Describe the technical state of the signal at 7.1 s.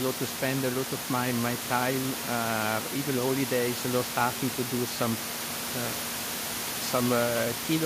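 At 7.1 s the signal is intact, with only the room's own background noise sitting about 8 dB below the speech.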